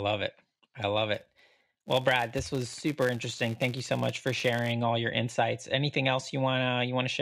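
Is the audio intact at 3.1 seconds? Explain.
No. At 3.1 seconds the clip is inside a stretch of filter restarted on every block, running from about 1.14 s, just after "it I love", to 4.73 s, just before "all your insights". Each processing block starts its filter from silence, leaving a small transient at every boundary. The result is a buzz near 172 Hz that rises and falls with the speech level, which fits a 256-sample block. A spectrogram shows evenly spaced vertical lines, and the waveform shows small regular spikes.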